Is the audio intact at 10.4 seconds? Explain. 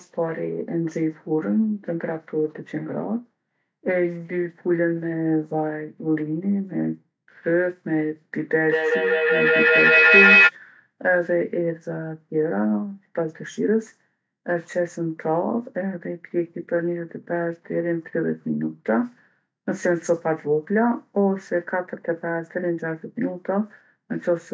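No. A feedback howl runs from 8.65 to 10.54 s: a mic-to-speaker loop gains level each trip, building a howl near 3 kHz, about 8 dB above speech, with the loop repeating roughly every fifth of a second.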